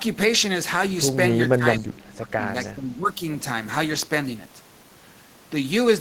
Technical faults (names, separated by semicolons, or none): speech suppressed in double talk; echo leak